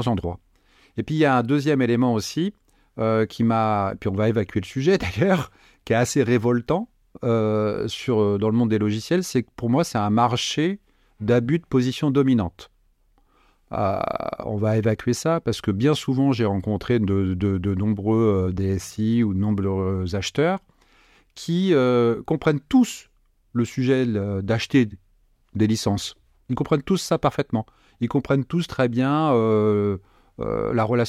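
A speech recording with nothing technically wrong to report; there's no moment anywhere in it where the audio breaks down or needs explaining.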